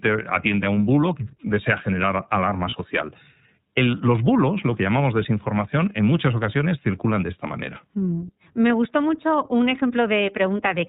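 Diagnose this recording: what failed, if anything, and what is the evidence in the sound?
At the codec stage, the speech passed through the iLBC codec, a narrowband VoIP coder. Nothing above 4 kHz survives, and plainly audible coding damage gives the whole clip a rough, slightly synthetic texture, which fits its 13.33 kbps mode with 30 ms frames.

At the network stage, there are lost iLBC frames from 2.69 s to 2.74 s. A missing packet left a 30 ms hole, which the decoder filled by repeating the last pitch cycle mixed with noise, heard as a brief held, buzzy vowel. Because iLBC frames decode independently, the speech recovers immediately afterwards.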